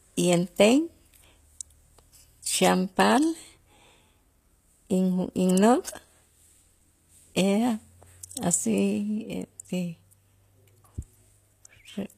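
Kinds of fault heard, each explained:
HE-AAC compression: The speech carries a bright but artificial top end, with s sounds turning gritty and lispy and nothing above about 14.9 kHz. Unlike a plain low-pass cut, the treble is present but rebuilt from copied lower bands, likely HE-AAC at around 24 kbps.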